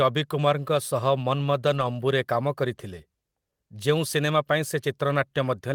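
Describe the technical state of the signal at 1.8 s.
At 1.8 s you're inside a lost packet rebuilt from error correction, 1.73 to 1.83 s: the decoder plays low-bitrate backup copies, so there's no gap, just rougher, noisier sound before "ଅମ୍ବୁ'ରେ କାମ କରିଥିଲେ".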